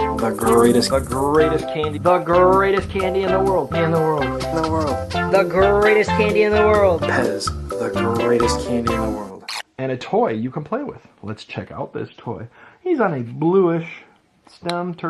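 Nothing here stands out as a fault; the audio has simply gone over a normal call connection, and its top end stops at around 12 kHz, as that kind of link typically does.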